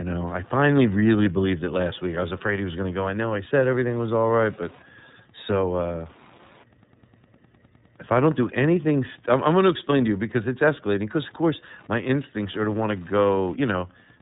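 Right through the whole clip there's Wi-Fi interference: a nearby radio's beacon, every 102.4 ms, gets rectified into a faint steady tick about ten times a second, well below the speech. The speech also carries plainly audible iLBC codec damage the whole way, rough and a bit synthetic with nothing above 3.8 kHz, which fits the 13.33 kbps, 30 ms frame mode.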